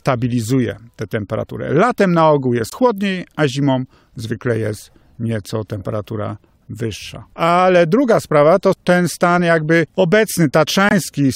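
At 2.70 to 2.73 s and again at 10.89 to 10.93 s the speech drops abruptly into dead silence, a hole of roughly 40 ms each time. This is a corrupt frame muted: damaged compressed frames were rejected by the decoder and replaced with silence, keeping timing intact.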